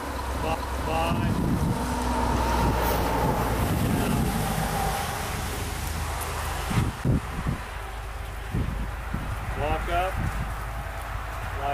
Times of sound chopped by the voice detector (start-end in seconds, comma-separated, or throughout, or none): none